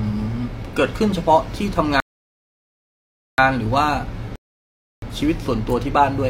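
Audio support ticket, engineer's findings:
Rebuffering stall, player playback buffer ran dry waiting on network delivery. Speech cuts to silence at 2.00–3.38 s (1.38 s added) and 4.36–5.02 s (0.67 s added), then resumes exactly where it stopped. No content lost, only time inserted.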